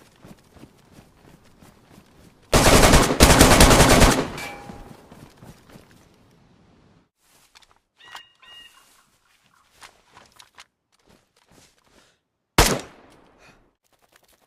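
No technical faults are audible.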